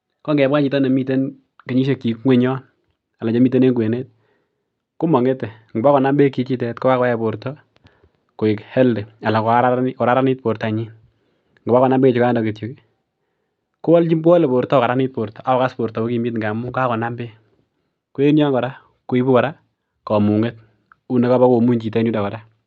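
No technical faults can be heard; the speech arrives through a call path that behaves as expected, Opus coding at 48 kbps with the audio band ending at 8 kHz.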